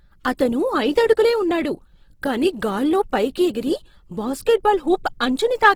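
Across the whole clip the speech has a rough, grainy texture. This is likely Opus compression working in its music mode at a low bitrate, around 16 kbps by the sound of it. The encoder keeps each band's overall energy but runs short of bits for detail. It fills the gaps with folded copies of lower bands or with noise. So there are few holes or swirls. Instead, tonal parts of the speech turn noisy and coarse. The bandwidth stays full, reaching about 20.2 kHz.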